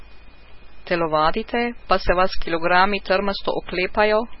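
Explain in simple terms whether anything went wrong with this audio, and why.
Something went wrong: the speech was likely squeezed hard by MP3 compression, which throws away detail it expects nobody will miss. Throughout, nothing above about 5.6 kHz survives, so the voice sounds dull and muffled, with a watery, swirling quality and smeared starts to sounds.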